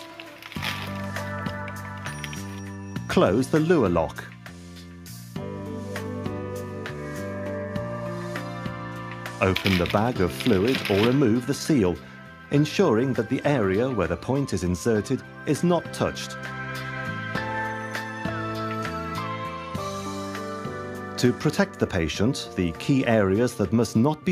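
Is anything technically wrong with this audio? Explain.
No, nothing technically wrong can be heard here.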